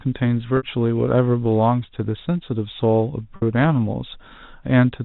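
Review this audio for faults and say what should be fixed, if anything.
Packet loss with pitch repetition occurs twice, at 0.57 to 0.63 s and 3.36 to 3.42 s. Each gap lasts 60 ms, which fits two lost packets. The last pitch period is looped, giving a brief held buzz that fades before the audio cross-fades back. Forward error correction or redundant packets on the network path would prevent these gaps.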